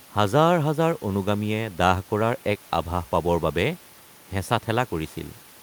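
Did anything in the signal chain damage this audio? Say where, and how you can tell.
No, none of the stages from the microphone to playback leave any mark of damage on this speech recording. The only thing under the speech is the room's own background noise, sitting about 27 dB below it, which was captured along with the recording rather than added by the system.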